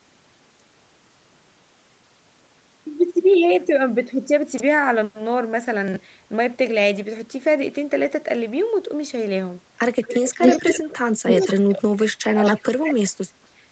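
At 4.52 to 4.60 s and again at 5.88 to 5.96 s, the sound jumps and briefly turns jumbled. These are chunks out of order: a 20 ms chunk plays three chunks late, after the audio that should follow it. Nothing is missing, but the 80 ms stretch is rearranged around three hard joins. On the waveform each join shows as an abrupt step. On the spectrogram, thin vertical broadband lines cut across harmonics that no longer line up.

From 10.02 to 10.94 s a delayed copy of the sound runs alongside it, about 220 ms behind and roughly as loud. It returns at 11.27 to 11.54 s, about 225 ms late. A short fragment at 12.45 to 12.52 s lags about 230 ms and sits about 15 dB lower. This echo leak likely comes from a loudspeaker on one side of the call whose echo canceller let some of the playback back through the microphone. On the spectrogram, each harmonic pattern appears twice, with the second copy shifted a fixed distance to the right.

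While the echo overlaps, the main sound also sinks. It dips by about 15 dB at 10.37 to 10.42 s, then drops much harder, at worst about 35 dB, in pieces between 10.75 and 13.38 s, about 2 s in total. This is speech suppressed in double talk, likely the canceller ducking everything because it could not tell the talker from the echo. The waveform envelope collapses in gaps, and the spectrogram fades, its upper band thinning. Above 8 kHz the spectrogram stays empty throughout, as expected for call microphone processing.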